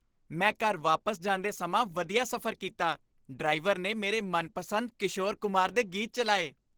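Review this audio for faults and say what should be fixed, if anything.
Opus compression, throughout the speech: the sound is muffled and hoarse, with a rough, grainy edge, which is the character of the encoder's hybrid speech mode. That points to a very low rate, around 16 kbps, as the likely cause. To prevent it, encode at a higher bitrate or keep the original source.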